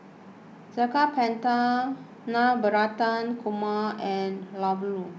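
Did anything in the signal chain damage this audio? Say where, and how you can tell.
No, nothing in the signal chain damaged this audio; the call path shows only its expected G.722 band limit, with nothing above 8 kHz.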